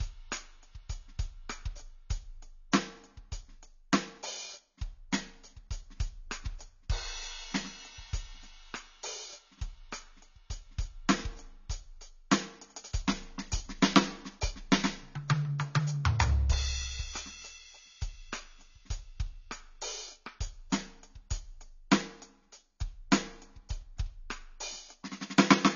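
From start to finish the music is band-limited and smeared, with nothing above 7 kHz, so the top octaves are simply gone and brightness turns dull. Sustained tones warble and high detail fizzes, the likely mark of AAC compression at a very low bitrate, around 24 kbps. The encoder drops the high band and starves the rest of bits. On a spectrogram there is a hard ceiling at 7 kHz, with patchy holes and blotches below it.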